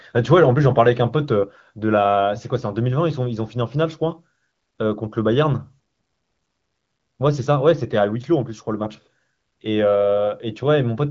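No faults are audible in this speech; the band limit near 7.4 kHz and the faint-at-most coding texture point to the AMR wideband (HD Voice) codec running at one of its higher rates, around 18 kbit/s.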